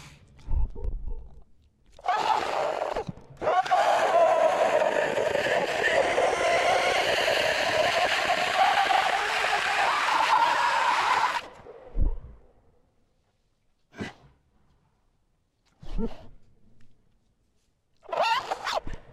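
No technical faults can be heard anywhere in the sound.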